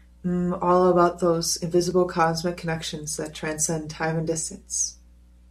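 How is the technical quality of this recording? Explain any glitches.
One glitch stands out in the speech, at 1.91 s. It is a tiny jump forward, most likely a dropped buffer (overrun): a few milliseconds of audio were overwritten before being read, so the two sides butt together. Unlike a dropout, no silent gap is heard.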